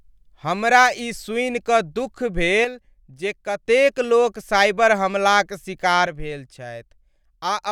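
From 2.65 s to 3.66 s the speech suddenly falls by about 6 dB, then jumps back to full level. The same abrupt drop returns at 6.07 s and lasts until the clip ends at 7.71 s. The likely cause is one channel dropping out. When one side of a stereo signal goes silent and the two sides are summed to mono, anything common to both channels loses half its level, and anything present only in the missing channel vanishes.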